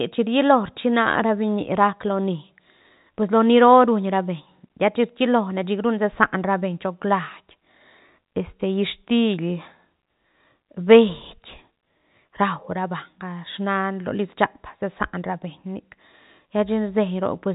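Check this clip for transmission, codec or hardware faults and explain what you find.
Nothing here points to a transmission, codec or hardware fault; the speech comes over as ordinary G.711 telephone coding, with the top end stopping at about 3.8 kHz as that format does and the usual faint codec texture along with it.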